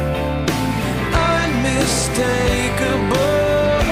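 A single sharp loud pop cuts through the audio at 1.17 to 1.19 s, peaking well above the surrounding level, while the sound continues underneath. Likely cause: a brief voltage pulse from a plug, switch, static or driver glitch.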